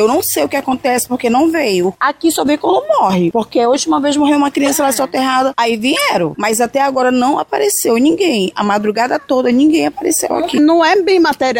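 At 0.71 s, 4.65–4.70 s and 5.96–6.01 s, a corrupt frame was decoded: damaged bits made the decoder place energy at the wrong frequencies, producing brief glitches, the later two spanning two frames and carrying the strongest errors, peaking around 0 and -5 dBFS. Unlike a dropout, sound is usually added rather than lost.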